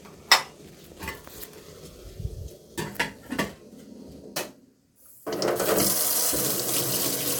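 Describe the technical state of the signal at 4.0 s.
At 4.0 s the signal is intact, with no audible dropout, distortion or other fault at that moment.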